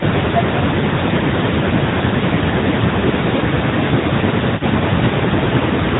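The whole clip runs through the AMR narrowband mobile codec at 10.2 kbps, and you can plainly hear it. Everything above 4 kHz is gone, and the low-bitrate vocal-tract model makes the speech sound buzzy and a bit synthetic throughout.

On top of that, the speech keeps getting turned down in bursts, at 0.05 to 0.7 s, 1.04 to 1.87 s, 2.06 to 3.24 s, 4.53 to 5.34 s, 5.59 to 5.66 s and 5.83 to 5.99 s. The dips go as deep as around 20 dB in the first stretch and roughly 10 to 15 dB in the later ones. That pattern is likely speech suppressed in double talk, where the echo canceller mistook the talker for loudspeaker echo while both sides were talking and pulled the level down.

Between those, at 3.99 to 4.04 s, there's one lost AMR speech frame of 20 ms. The decoder papered over it by repeating the previous frame's settings at a lower gain, so you hear a brief dip or warble.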